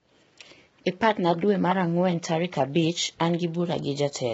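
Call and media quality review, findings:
Rough, grainy speech throughout, with noise filling the gaps between pitch harmonics. Nothing above about 7.8 kHz. Heavy codec damage. Likely low-delay AAC compression (AAC-ELD) at a low bitrate, around 16 kbps. The low bitrate leaves too few bits per frame to code the spectrum cleanly.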